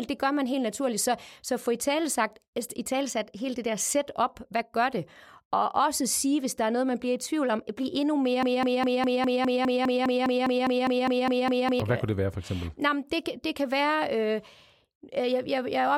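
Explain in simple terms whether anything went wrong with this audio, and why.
The playback or stream likely stalled, causing a broken-record loop: after "tvivl om blive endnu", a 0.2-second snippet repeats 17 times from 8.43 to 11.80 s.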